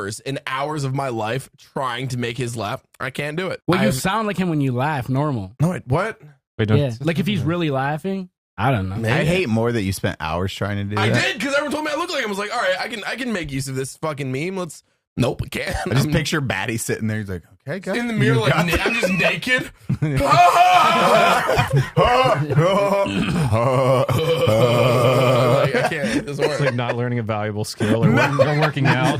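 No technical faults are audible anywhere in the audio.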